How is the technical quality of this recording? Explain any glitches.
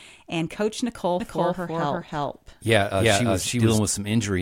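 The recording has one clear glitch. From 1.2 to 3.78 s, a doubled audio track appears. A second copy of the speech runs about a third of a second late, roughly as loud as the original. It likely comes from a slower second capture path mixing in. The copy is dry and starts and stops abruptly.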